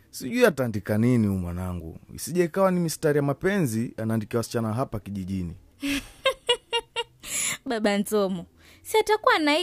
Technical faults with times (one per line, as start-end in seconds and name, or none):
0.51-0.75 one channel drops out
7.67-7.84 one channel drops out